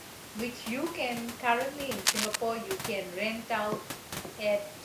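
Overdone noise removal runs throughout: the suppression pulls individual frequency bands far down whenever they sit near the noise estimate, so the speech sits over a near-silent floor with twinkling specks. On a spectrogram this shows as a patchy, holed background dotted with isolated bright points. From 2.05 to 2.36 s comes cable scratch noise, a dense, uneven rustling burst roughly 5 dB above the speech, likely from a worn cable or connector being moved. It appears as a ragged broadband smear on the spectrogram and a jagged cluster of spikes in the waveform.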